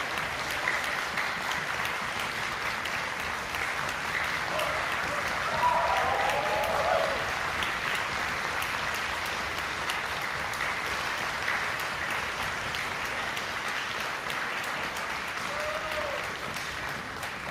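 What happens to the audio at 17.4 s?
Nothing goes wrong at 17.4 s; the audio there plays through cleanly, with no dropout, click or distortion.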